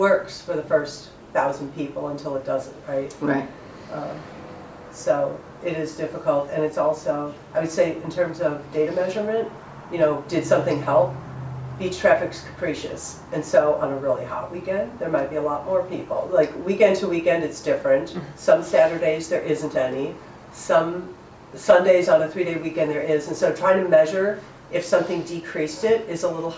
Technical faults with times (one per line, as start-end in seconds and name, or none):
none